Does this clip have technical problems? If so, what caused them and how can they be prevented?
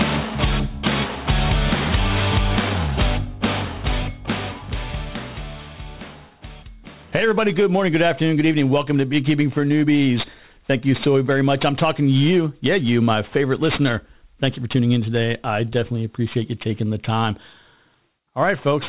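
Yes. Aliasing runs throughout: content above 4 kHz folds back below it as gritty, metallic tones unrelated to the source, roughly 20 dB below the signal, which fits a drop to an 8 kHz rate without filtering. Applying a steep anti-aliasing low-pass filter before downsampling prevents this.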